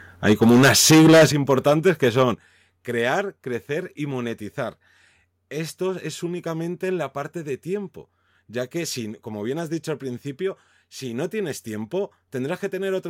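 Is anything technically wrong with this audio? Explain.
Yes. From 0.26 to 2.22 s, just before "crear crecer y monetizar", the speech shows microphone overload. Peaks run about 14 dB past the converter's limit, so roughly one sample in seven is flattened. This is likely from an input gain set too high. The loud syllables sound harsh and crackly.

The microphone volume is stepped down four times: at 0.33 s by about 2 dB, at 1.32 s by about 9 dB, at 2.34 s by about 7 dB just before "crear crecer y monetizar", and at 3.36 s by about 2 dB before "crecer y monetizar". Each is an abrupt drop in voice and background together, likely the call software cutting device gain in response to the clipping.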